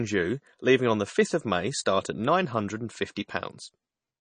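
From start to finish the speech carries plainly audible codec damage, most likely MP3 compression at a low bitrate, with the sound pointing to something around 32 kbps. Nothing remains above about 9.4 kHz, where the encoder has cut the treble to save bits. Weak spectral detail flickers in and out between frames, giving the speech a watery, swirling texture, with metallic chirps on sibilants and softened, smeared onsets.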